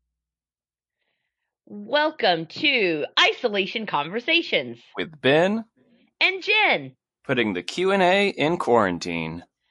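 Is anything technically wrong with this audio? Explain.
Yes. Throughout the speech there is plainly audible MP3 compression damage, likely from a low-bitrate encode. S sounds turn watery and chirpy, and consonant attacks smear, which fits a bitrate around 48 kbps that forces the encoder to drop weak frequency lines frame by frame.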